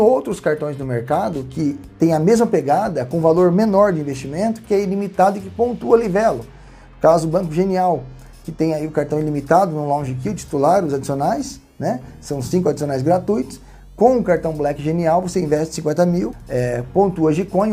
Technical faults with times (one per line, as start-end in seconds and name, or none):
12.46-12.52 AAC frame loss with concealment